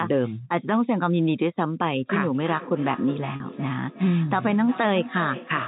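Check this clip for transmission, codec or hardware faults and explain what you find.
Two faults are audible.

From 2.35 s to 5.67 s, each phrase returns about every 400 ms, thinner and ringing, up to about 12 dB below the speech. This is feedback echo between two devices: one device's microphone picks up another's loudspeaker, beyond its own echo canceller's reach.

At 3.36 to 3.40 s, a 40 ms stretch sounds briefly held and buzzy. This is packet loss with pitch repetition: the receiver bridged a couple of lost packets by repeating the last pitch period.

The telephone band limit of G.711 coding, with nothing above 4 kHz, is heard throughout.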